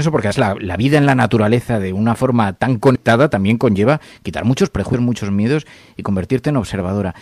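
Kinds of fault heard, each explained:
Compressed frames skipped: speech jumps forward abruptly at 0.30 s, around 2.94–2.96 s, and at 4.93 s, as whole blocks of coded audio fail to play. Roughly 150 ms of audio vanishes at the first jump and about 100 ms at each of the others, which fits the loss of four or five frames of about 26 ms each. Because adjacent frames overlap, each join is a short smeared blip rather than a sharp click.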